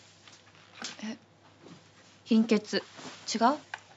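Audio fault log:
No faults heard.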